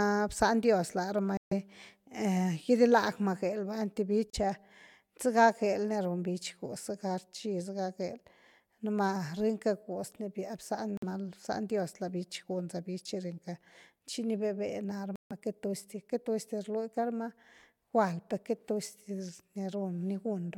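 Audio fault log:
1.37–1.53 s, 4.30–4.35 s, 10.97–11.03 s, 15.16–15.32 s, Bluetooth stall: speech drops to silence for 142, 32, 50 and 150 ms, likely because interference starved the headphone buffer.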